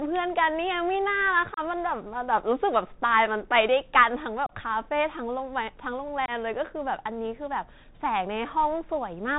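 The whole clip of speech passes through a Bluetooth CVSD headset codec, the narrowband one-bit delta scheme that tracks the waveform with an adaptive step, which fits a 64 kbps link. Nothing above 4 kHz survives, so the speech sounds boxed in. Where the step size can't keep up with loud, bright sounds, the output distorts, sibilants turn scratchy, and a grainy hiss sits under everything. The damage is plainly audible from start to finish.

On top of that, unconcealed Bluetooth headset packet loss hits three times. At 1.54 to 1.59 s and 4.46 to 4.53 s, about 30 ms of audio drops out each time, roughly four packets' worth. At 6.26 to 6.31 s, 22.5 ms goes missing, around three packets. Nothing fills these gaps, so each is a short, hard-edged hole, and the speech resumes briefly quieter while the CVSD decoder recovers.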